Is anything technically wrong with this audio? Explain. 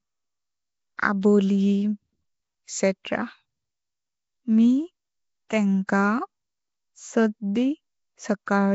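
Yes, two faults are audible in this speech.

Throughout, a rough, hissy, underwater quality with nothing above 7.7 kHz points to Nellymoser compression, likely at about 32 kbps. Spectrograms show a hard ceiling and speckled noise-filled bands.

Pre-echo occurs at 0.97 s and 1.21 s. Block-spread quantisation noise leaks ahead of attacks by 13 ms and 18 ms, making short hiss before each onset in the waveform.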